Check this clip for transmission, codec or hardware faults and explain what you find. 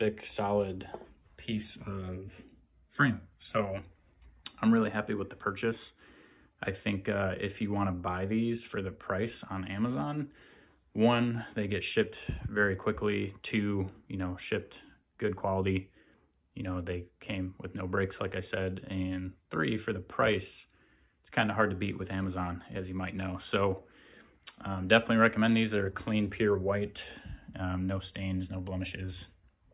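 No transmission, codec or hardware faults are audible anywhere in the recording; the signal holds steady throughout.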